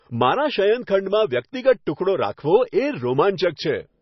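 Speech, with MP3 compression damage throughout. Nothing is heard above 5.9 kHz. The sound is watery and swirly, and s sounds chirp metallically. The encoder likely ran short of bits, cutting the treble and dropping weak frequency lines. That fits a bitrate near 24 kbps.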